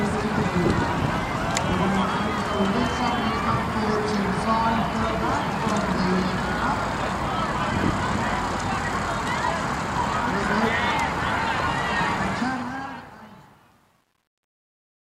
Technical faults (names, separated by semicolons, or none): truncation distortion on a fade